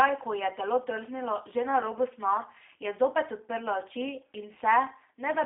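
G.729 coding runs throughout the speech. Each 10 ms frame is rebuilt from a vocal tract filter, pitch predictor and a few pulses, giving a plainly rough, synthetic texture. The band sits between 250 Hz and 3.6 kHz, nothing above 3.7 kHz, which fits an 8 kbit/s stream.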